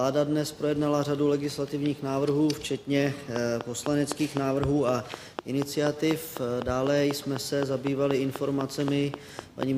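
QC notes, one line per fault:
3.36 to 9.64 s: train of clicks, about 30 regular ticks at 3.99 per second, well above the sound, likely external interference; thin vertical lines on the spectrogram.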